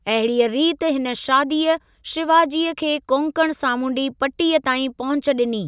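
No technical faults can be heard anywhere in this speech recording. There is nothing in it that needs a time mark or further comment.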